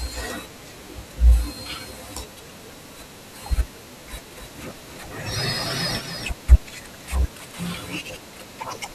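From 4.31 to 6.31 s, a doubled audio track: the speech was likely captured twice, so a dry copy trails about 300 ms behind, roughly 5 dB quieter.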